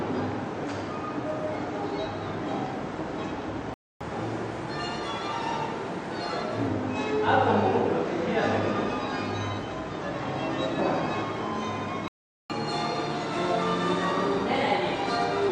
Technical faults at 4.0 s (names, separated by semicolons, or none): playback stall; catch-up at higher speed